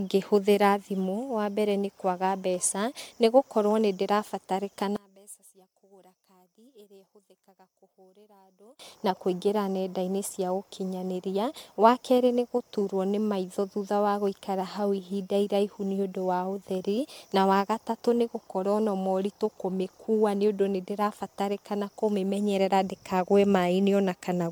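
Generation loss runs throughout. The speech sounds swirly, smeared and hollow, with blurred attacks and nothing above 19.9 kHz. The likely cause is around ten successive MP3 passes, which fits 128 kbit/s.

One channel inverted, from 4.96 to 8.79 s: summed to mono, the centred speech drops by about 27 dB, likely because one side's polarity was reversed.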